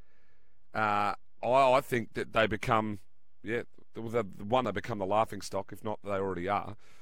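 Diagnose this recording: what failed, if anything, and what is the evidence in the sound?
A DC offset of about -43 dBFS, likely from the converter or analogue front end, shifts this speech off zero; waveforms sit off-centre, spectrograms show a steady 0 Hz line.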